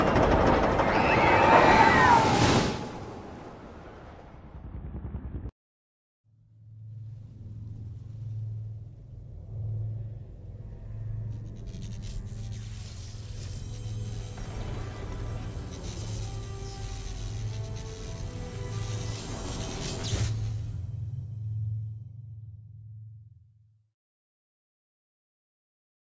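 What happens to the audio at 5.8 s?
Nothing goes wrong at 5.8 s; the audio plays through that moment intact, with no fault to be heard.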